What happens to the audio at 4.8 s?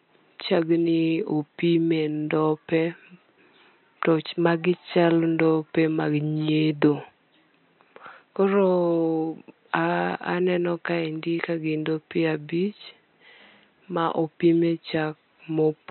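Nothing goes wrong at 4.8 s; the audio is intact there, with only the room's own background noise sitting about 52 dB below the speech.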